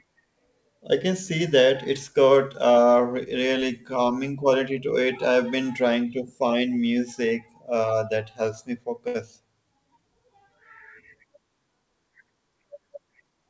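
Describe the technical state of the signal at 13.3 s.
At 13.3 s the sound is inside a jitter buffer speed-up running from 13.22 to 13.47 s. The receiver had built up surplus delay and cut it back by deleting short pitch-period-sized pieces in quick succession, removing about 40 ms in all, so playback runs at 113% speed with unchanged pitch and sounds rushed. On a waveform the periodic cycles close up with no gaps. A spectrogram shows harmonics at their normal spacing but compressed in time, all below the 8 kHz ceiling of the call codec.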